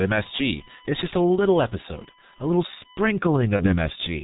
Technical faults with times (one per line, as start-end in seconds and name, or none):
0.00-4.23 G.723.1 codec
0.00-2.97 USB whine
3.56-3.76 VoIP packet loss concealed by the speech codec